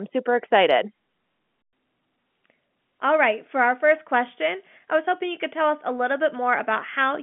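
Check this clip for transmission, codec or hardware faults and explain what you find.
I hear no transmission, codec or hardware faults in this speech clip.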